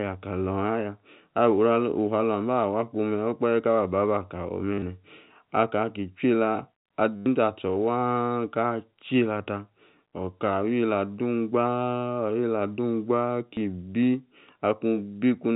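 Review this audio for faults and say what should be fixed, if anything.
Packet loss with last packet repeated occurs at 4.74–4.82 s, 7.16–7.26 s and 13.54–13.57 s. Lost audio was filled by replaying the previous packet, which produces a brief robotic stutter. The 100 ms gap at 7.16 s is the longest, and the scattered 60 ms loss at 4.74 s includes one 40 ms run. The buzz pitch fits 10 ms packets, repeating at about 100 Hz. On a waveform the same short segment appears several times in a row. On a spectrogram there is even harmonic striping at 100 Hz spacing. To prevent it, add a larger jitter buffer and use proper packet loss concealment that blends or extrapolates rather than repeating raw packets.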